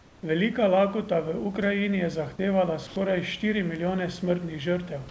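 From 0.00 to 0.23 s, the room background is replaced by a smooth, even hiss about 3 dB quieter than the real background heard afterwards. This is comfort noise in place of the background, likely from discontinuous transmission: the sender stopped sending during the pause and the receiver filled the gap with synthetic noise roughly matched to the room's spectrum. The same thing happens from 2.87 to 2.96 s, just after "je zahtevala". For those 90 ms the texture goes flat and featureless, though here the level matches the surrounding background. Across the audio, nothing is present above 8 kHz, which fits a G.722 call codec.

At 3.76 s a sharp snap sits on top of the audio. This is an electrical switching spike, likely a brief arc from a nearby switch or static discharge that the line picked up as a short click.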